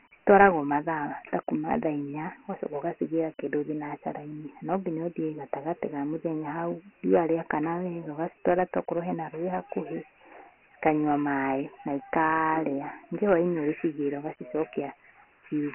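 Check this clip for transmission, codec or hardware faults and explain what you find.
One codec fault runs through the whole clip.

Dialogic VOX ADPCM, throughout: coarse 4-bit adaptive coding, consistent with 24 kbps at 6,000 samples a second, removes everything above 3 kHz and leaves heavy gritty hiss trailing the speech.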